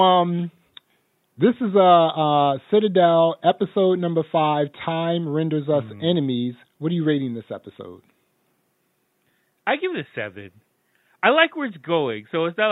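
No technical faults can be heard anywhere in the speech.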